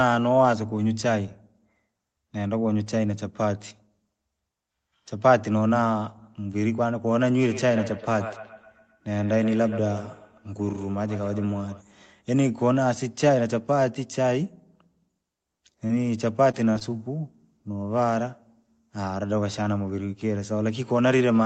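From 7.5 to 11.84 s each syllable returns as a thin, ringing repeat about every 150 ms, peaking at about 13 dB below the speech. This is feedback echo between two devices: a second device replays the call into a nearby microphone whose echo canceller cannot remove it.

Brief smears or wobbles at 15.87–15.91 s, 16.51–16.55 s and overlapping at 16.73–16.90 s and 16.79–16.83 s are short concealed packet loss. Each gap of about 20 ms, which fits 20 ms packets, was filled by extending the preceding sound, and the third stretches the timing by a few milliseconds.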